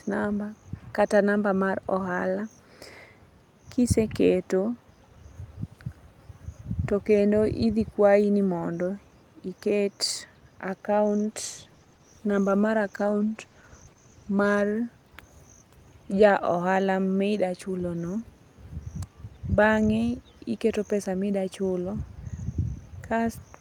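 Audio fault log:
11.05–16.23 s, call bitrate drop: the bandwidth estimate fell and the encoder coarsened its coding, muffling the high frequencies and leaving the speech rough and watery. The worst stretch lasts about 3.1 s, at the bottom of a fall from roughly 48 to 14 kbps.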